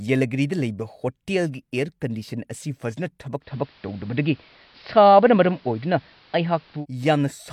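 At 3.4 s, just after "ꯑꯁꯤ ꯐꯖꯅ", the radio loses its digital signal and blends to analogue, cross-fading over 128 ms to the AM broadcast until 6.86 s. Treble is reduced, level shifts about 3 dB, and faint hiss appears.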